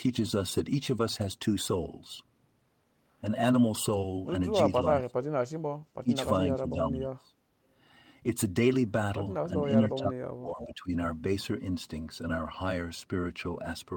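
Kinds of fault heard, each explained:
speech suppressed in double talk: The speech dips sharply four times, from 4.99 to 5.33 s, 6.02 to 6.11 s, 6.56 to 7.34 s and 9.81 to 10.92 s. The words thin out or nearly vanish, falling by roughly 20 to 30 dB, with the longest dip lasting around a second. This is likely an echo canceller facing both sides talking at once: unable to separate the near talker from the far-end echo, it turned everything down.
echo leak: A brief ghostly scrap of earlier speech appears at 10.61 to 10.65 s, sitting about 15 dB below the main speech and lagging it by 388 ms. The delayed copy is faint. It is likely loudspeaker sound picked up by one side's microphone that its echo canceller failed to remove fully and sent back down the line.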